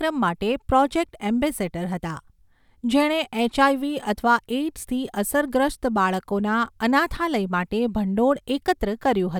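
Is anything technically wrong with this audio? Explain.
No, nothing technically wrong can be heard here.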